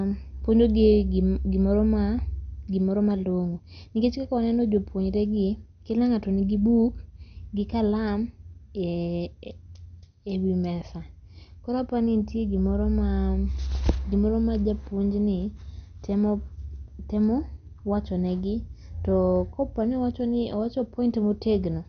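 Throughout the speech, likely MP2 compression at a low bitrate, around 48 kbps: too few bits forced the encoder to shut off upper sub-bands, leaving nothing above 6.5 kHz and coarsely quantising the rest. The result sounds dull, with plainly audible gurgling, granular distortion.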